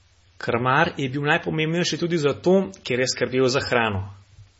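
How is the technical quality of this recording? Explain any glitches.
Quality is poor throughout, with heavy damage that is likely from MP3 compression. A bit-starved encoder, consistent with about 24 kbps, cuts everything above 7.6 kHz and zeroes weak lines, making speech dull, watery and swirly.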